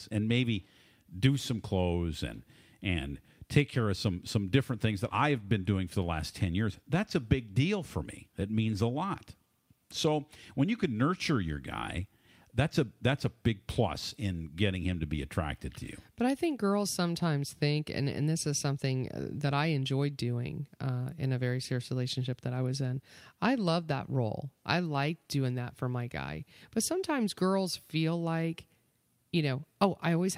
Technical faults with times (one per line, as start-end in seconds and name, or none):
none